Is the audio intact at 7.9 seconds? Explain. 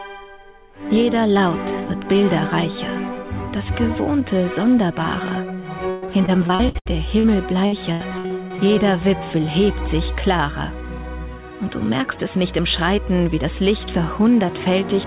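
No. At 7.9 s the audio sits inside a stretch of repeated packet loss (robotic sound) running from about 7.66 to 8.60 s. Six separate gaps occur, the longest 80 ms, and each one is filled by extending the last received sound. Roughly a third of that span is concealed, about 280 ms in total. This produces choppy, robotic audio with pieces missing, heard over a band that stops at 4 kHz.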